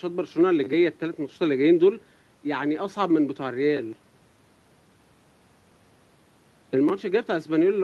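Nothing in this bit of speech stands out as a technical problem; there's no glitch or fault to point to anywhere along the way.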